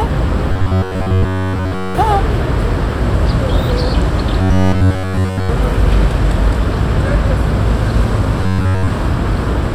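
Robotic sound from repeated short buffers at 0.52 to 1.95 s, 4.42 to 5.49 s and 8.42 to 8.88 s, likely a looped 10.7 ms segment, which forces a rigid, metallic 93.8 Hz buzz, with the audio repeated fully in the first two and mostly in the last.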